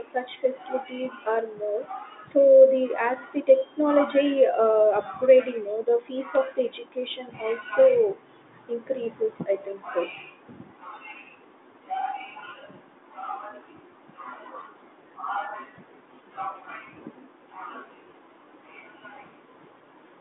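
No technical faults are audible.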